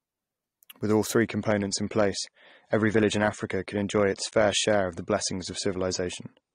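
At 1.24 s the speech abruptly loses its top end and stays dull to the end: an adaptive stream at a lower bitrate, nothing above 9.7 kHz, consistent with AAC dropping from 96 to 32 kbit/s. Unlike a dropout, there's no gap; unlike plain filtering, swirly codec artefacts rise.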